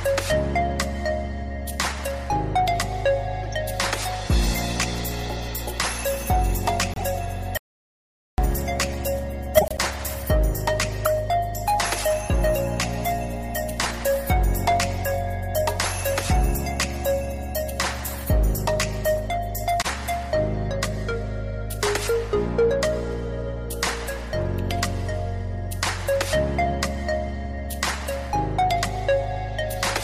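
Damaged compressed frames were decoded and played as though intact at 3.43–3.48 s and 6.93–7.02 s. Misread gains and codes push energy into the wrong frequencies, so each gives a short chirp or noise burst, the first faint and the second louder. At 7.57 s the input was likely lost while the recorder kept writing silence. This audio dropout to silence lasts about 0.81 s, until 8.38 s, with the sound cut off abruptly and no room tone underneath. Further corrupt frames decoded at 9.57–9.79 s, 11.05–11.07 s and 26.65 s bring more blips and squeaks. The first two are loud, and the last is a quieter tick.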